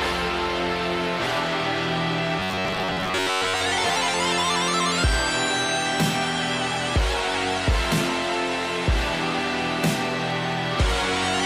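From 2.39 s to 3.63 s the audio collapses into robotic sound from repeated short buffers: a rigid, metallic buzz pitched at 93.8 Hz that only loosely follows the underlying sound. The likely cause is new audio arriving too slowly, so playback fills the gaps by looping the last fragment of about 10.7 ms. Most of the material in this stretch is replaced by repeats, and the real audio between them is skipped.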